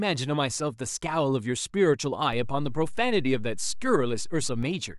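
At 2.33 s a DC step shifts the waveform's zero line by about -30 dBFS, giving a low thump and a visibly shifted baseline; it steps back at 4.63 s.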